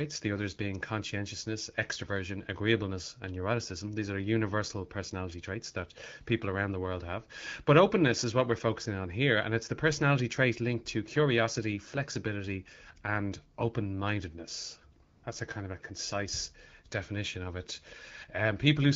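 At 15.03 s, just after "flexibility and open mindedness", AMR comfort noise takes over for 200 ms, until 15.23 s. The phone treated the talker as silent and stopped sending speech frames. The receiver filled the gap with synthetic noise built from a rough sketch of the background's level and spectrum. The real room sound drops away. A smooth, even hiss replaces it, then switches back out. Around it, the wideband speech sounds clear, with only light coding damage, which fits the 12.65 kbit/s AMR-WB mode.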